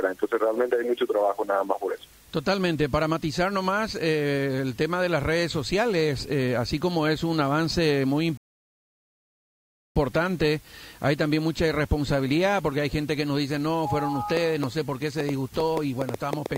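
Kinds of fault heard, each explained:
Rebuffering stall: At 8.37 s the sound drops abruptly into silence and stays silent until 9.96 s, then picks up at exactly the point where it stopped, with nothing skipped. That gap adds about 1.58 s to the playback. It happens when the player uses up all the audio it has downloaded and has to wait for more data before continuing, so the listener hears a pause rather than a loss.
Train of clicks: From 14.37 s until the end, a series of sharp ticks or pops sits on top of the sound. There are around ten of them, about five per second, spaced unevenly, and they peak roughly 15 dB above the audio itself. The ticks are alike in shape, which points to one source repeatedly injecting a pulse, likely electrical interference from nearby equipment or a faulty connection or power supply.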